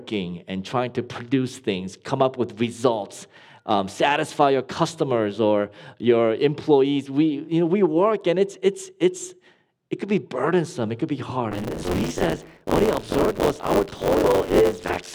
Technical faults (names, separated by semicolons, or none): buffer tearing